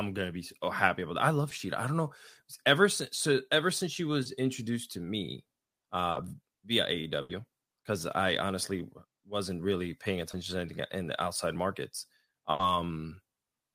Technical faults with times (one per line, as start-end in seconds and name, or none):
1.49-1.53 short concealed packet loss
4.23-4.27 short concealed packet loss
6.11-6.17 short concealed packet loss
7.21-7.31 burst of packet loss
10.31-10.35 short concealed packet loss
12.51-12.61 burst of packet loss